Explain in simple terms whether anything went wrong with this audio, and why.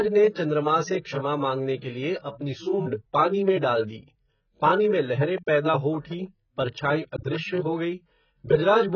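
Yes, two things went wrong. The speech was most likely squeezed through heavy AAC compression, a way of shrinking audio files that throws away detail the encoder judges least important. Here it threw away a lot: nothing above about 6.6 kHz survives, so the top end is cut off. Throughout the clip the speech sounds dull and muffled, with a smeared, warbling or fizzy texture on hissy sounds like s and sh.

The same compression also caused pre-echo, from 3.61 to 3.63 s, right after "अपनी सूंड़ पानी में" and just before "डाल दी पानी में". The encoder works on short blocks of sound and spreads its errors evenly across each block. When a sharp sound starts late in a block, that error noise also spills into the quiet moment before it. You hear a brief hiss of about 22 ms leading into the sound, whose start comes across soft and blurred.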